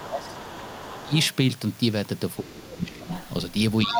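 From 0.02 to 1.14 s the speech is suppressed in double talk. The talker dips by up to about 15 dB across roughly a second. The likely cause is an echo canceller that could not separate the talker from loudspeaker echo and so turned both down. Within and just after that span, from 0.22 to 0.83 s and again from 1.01 to 1.35 s, the other side's voice leaks through. It sits about 20 dB below the speech and sounds faint, which points to echo left in the microphone signal. From 2.42 to 3.07 s the speech is suppressed again, dropping up to about 15 dB over about half a second. At the same time, from 2.48 to 3.29 s, the other side leaks through louder, about 10 dB below the speech. From 3.84 s to the end the leak rises to about 5 dB below the speech, and from 3.86 s the talker dips by up to about 10 dB.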